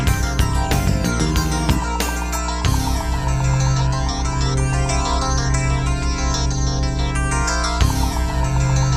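A steady mains hum at 60 Hz runs under the sound for the whole clip, loud enough to sit only a few decibels below the wanted audio. It points to a ground loop or a nearby transformer feeding the power-line frequency into the signal path. What separates it from low-frequency rumble is its fixed pitch: a single unwavering tone with a few low harmonics, rather than the shifting, broadband thump of handling or traffic noise.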